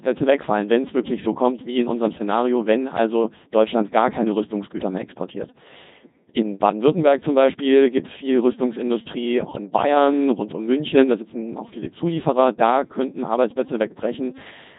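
Throughout, the speech is carried by a Codec 2 vocoder at 2.4 kbit/s. Only pitch, voicing, energy and spectral envelope survive, so the resynthesised voice sounds heavily robotic and buzzy. From 10.96 to 11.04 s, bit errors on the digital voice radio link, at a rate of a couple of percent, corrupt what sounds like about two frames' parameters. The voice briefly lurches in pitch and tone, breaking into a warbling bleep.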